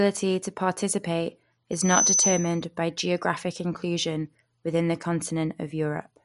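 Loudspeaker feedback squeal appears at 1.71 s and holds until 2.63 s. A single tone at 6 kHz swells up over roughly a third of a second. It then sits above the speech, about 5 dB louder. The microphone is hearing the loudspeaker it drives. At 6 kHz the loop gain has passed one, so that frequency keeps feeding itself. It stops only when the loop is broken, near 2.63 s.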